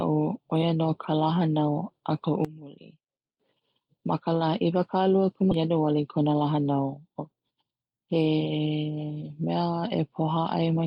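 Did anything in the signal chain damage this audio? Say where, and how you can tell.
Yes. From 2.45 to 3.40 s the speech drops by about 19 dB and turns faint. This is likely one channel inverted in the wiring or channel handling, so the mono sum cancels everything common to both sides.

At 5.51 to 5.53 s there is a skip ahead: the audio jumps forward with no gap fill, and about a second of speech is simply missing. This is a network or jitter-buffer stage discarding a backlog and splicing the two sides almost directly.

Right after, from 5.61 to 7.98 s, a jitter buffer speed-up makes the speech run at about 111% speed with unchanged pitch, sounding hurried. The receiver trimmed short pitch-period pieces repeatedly, removing roughly a third of a second to reduce accumulated delay.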